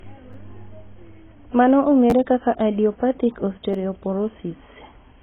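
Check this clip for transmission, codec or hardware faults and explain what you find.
The speech carries two faults: heavy codec damage across the whole clip and three brief stutters from a repeated buffer.

AAC compression is the likely cause of the dull, smeared tone, with a hard ceiling at 3.8 kHz and a warbling, fizzy texture on sibilants. The encoder discards content to meet what sounds like a very low bitrate. A spectrogram shows a flat cut at 3.8 kHz and patchy holes below it.

Repeated buffers occur at 0.33 s, at 2.10 to 2.12 s just before "kaka idiopathic", and at 3.73 s just after "kaka idiopathic". When new audio arrived late, the device replayed a short piece, about 11 ms long, which fits a 512-sample buffer. It plays once more at 0.33 and 3.73 s and twice more at 2.10 s, so about 10 ms and 20 ms of audio are lost. Each is heard as a click or short buzz. On a waveform it appears as identical repeated segments with hard joins.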